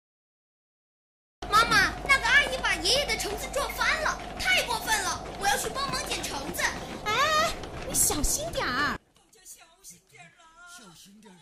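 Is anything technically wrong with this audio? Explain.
Yes, two faults.

Cut-off start, 0 to 1.42 s: the recording began late, so there is digital silence and then sound enters abruptly mid-event at 1.42 s, with no attack.

One channel inverted, 8.96 s to the end: likely one stereo channel flipped polarity, so the mono sum cancels shared content and the level drops by about 23 dB, leaving a faint remainder.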